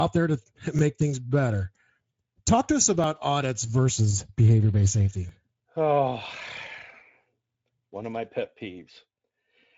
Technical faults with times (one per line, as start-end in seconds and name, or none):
0.00-9.78 Speex codec
0.79-7.55 clock drift buffer slips